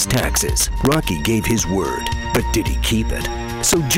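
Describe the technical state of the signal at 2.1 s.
Sharp, violent cracks burst out on the loudest peaks around 2.1 s, far harsher than ordinary clipping. This is integer overflow, present throughout: the signal is driven about 5 dB past the integer limit, and the small fraction of samples that exceed it wrap to the opposite sign instead of being held at full scale.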